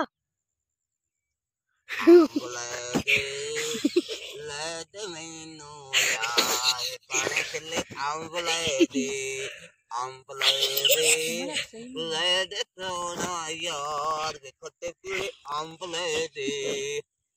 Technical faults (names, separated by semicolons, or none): periodic USB or driver dropouts